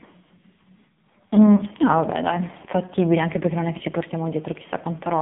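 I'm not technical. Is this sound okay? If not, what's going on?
No. The whole clip has gone through the AMR narrowband mobile codec, the speech coding used on older mobile calls. Only the band from about 150 Hz to 3.6 kHz survives, and heavy squeezing makes the speech buzzy and synthetic, not just thin like a plain landline.

There are also two lost AMR speech frames, at 1.56 to 1.63 s and at 3.78 to 3.83 s. Each time one 20 ms chunk was garbled by radio errors, so the phone briefly patched over it by repeating the previous sound more quietly. You hear a short dip or warble rather than a clean gap of silence.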